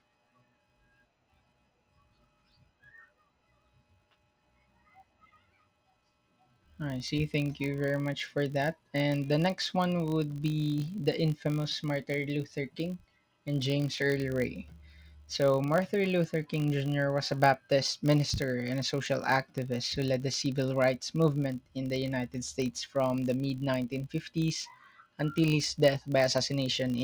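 Throughout, a filter restarted on every block loses its state, apparently every 20 ms; the start-up ticks form a 50 Hz buzz that tracks the speech level.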